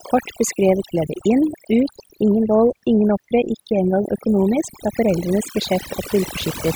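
A short speech recording carries overdone noise removal from start to finish. The background drops and breaks up into twinkling specks, because individual frequency bands are being pushed far down or switched off whenever they drift close to the noise estimate, taking the quieter parts of the voice with them. A simple noise gate would instead cut the whole signal at once, leaving clean pauses without that scattered tonal sparkle.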